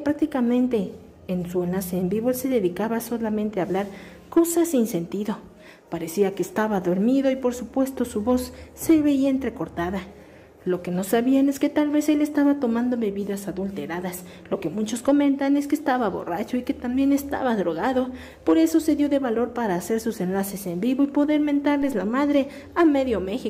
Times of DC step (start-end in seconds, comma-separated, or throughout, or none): 21.82